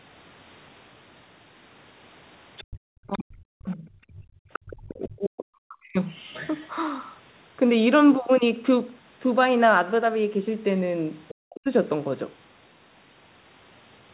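Speech from a call, with three kinds of echo-canceller trouble around a narrowband path that stops at 4 kHz, as a G.711 call would. The other side's voice leaking through sits faintly under the talker, roughly 15 to 20 dB down, at 2.57–3.23, 4.11–4.73, 6.16–6.69 and 11.28–11.35 s. It is likely residual loudspeaker echo the canceller failed to remove, and it differs from crosstalk because it is the far side's own voice coming back through the loudspeaker. Speech suppressed in double talk follows at 3.05–3.86, 4.64–5.98 and 11.45–11.66 s. Here the talker's own voice sinks by up to around 40 dB or breaks into pieces while the far side is active, likely because the canceller could not separate the two and turned both down. Unlike plain dropouts, the first two dips overlap the leaked voice. Background gated by the echo canceller appears at 4.14–4.36 s. The room tone, rather than the voice, drops by about 26 dB for roughly 150 ms as the canceller clamps the microphone, then returns when it releases.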